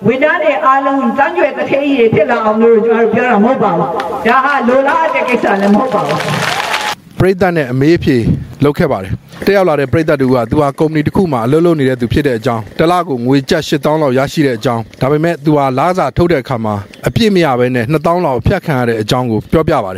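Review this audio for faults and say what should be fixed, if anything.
Gain pumping runs through the whole clip, with the gain swinging around 20 dB, so everything sounds squashed. That's likely a fast limiter or compressor clamping down on input gain set far too high. Next time, bring the mic gain down so peaks sit well below the limiter threshold.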